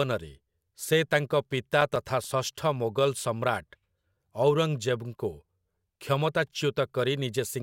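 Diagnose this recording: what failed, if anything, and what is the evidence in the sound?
Eight short, evenly spaced ticks break into the speech between 1.52 and 2.53 s, about eight a second, each a few milliseconds at most. These are CD scratch ticks from playback: each disc turn, a blemish corrupts more data than error correction can rebuild, so the player conceals those samples.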